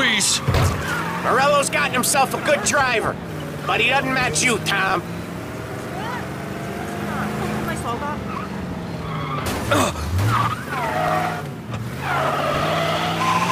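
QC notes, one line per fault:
4.90 s, 11.08 s and 12.60 s, dropped buffer (overrun): the capture side likely failed to read its samples before the hardware wrote over them, so a short stretch of audio never arrived and the material on either side was spliced straight together. There is no gap of silence. Each point is heard as a jump where the sound skips forward, losing roughly 15 ms at the first, about 5 ms at the second and around 10 ms at the third.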